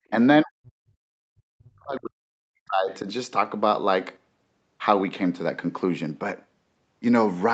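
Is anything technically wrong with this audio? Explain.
Yes. Two problems are audible. In the first 0.08 s the room sound is pinched off: this is background gated by the echo canceller. While the far-end loudspeaker was active, the canceller clamped the microphone gain, pulling the ambience down by about 38 dB for around 70 ms before releasing it. It sounds like a brief hollow gap in the room tone. On a waveform the noise floor collapses almost to a flat line at the very start. A spectrogram shows a short vertical band of near-empty columns before the background texture returns.

From 0.42 s to 3.07 s the speech is pushed down, which sounds like speech suppressed in double talk. The likely cause is both ends talking at once, so the canceller could not tell the local talker from the loudspeaker echo and attenuated everything. The voice dips by up to roughly 40 dB across about three seconds. 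The waveform shows a sunken envelope. The spectrogram shows the harmonic energy thinning out. The call's microphone processing has left nothing above 8 kHz, which is the expected bandwidth for this kind of path.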